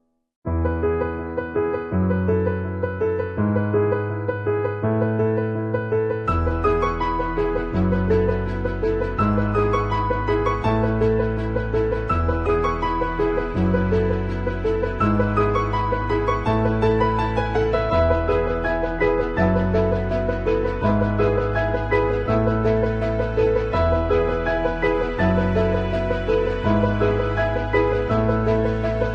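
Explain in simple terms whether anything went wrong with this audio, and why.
Throughout the clip, from start to finish, the sound is dull and carries a gurgling, grainy distortion, the kind familiar from low-quality digital radio. The likely cause is MP2 compression squeezed too hard. That format cuts the sound into many narrow slices of pitch and shares out a limited budget of detail among them. With too little to go round, the highest slices flicker on and off or drop out, and the rest are stored roughly, which produces the murky texture.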